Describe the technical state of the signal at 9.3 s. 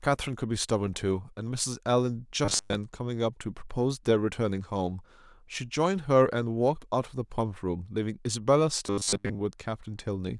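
At 9.3 s new audio is likely arriving too seldom, so from 8.87 to 9.42 s playback keeps repeating a 10 ms buffer in place of most of the real signal. This robotic sound from repeated short buffers forces a rigid, metallic 100 Hz buzz onto the speech.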